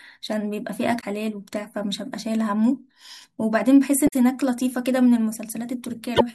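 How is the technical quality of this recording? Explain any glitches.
Three short glitches from damaged data in a compressed stream break up the speech, at 0.97 to 1.04 s, 4.05 to 4.13 s and 6.13 to 6.21 s. In each, corrupted bytes make the decoder misread frames and lose sync until it finds the next valid header. Each is heard as a brief chirp, squawk, click or short hole of 60 to 90 ms. On a spectrogram each shows as a vertical break cutting across the speech harmonics, and the waveform shows a discontinuity there.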